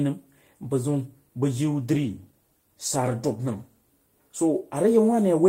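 At 1.79 s, just after "bag jiu", a call bitrate drop sets in. The bandwidth estimate fell and the encoder coarsened its coding, consistent with roughly 32 down to 18 kbps. The speech turns rougher and less detailed until recovering near 3.99 s.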